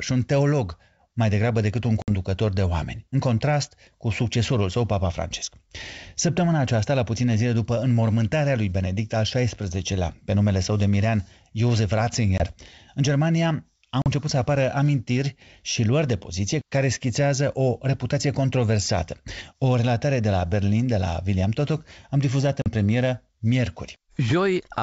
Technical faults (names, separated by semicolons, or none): packet loss on an ADPCM call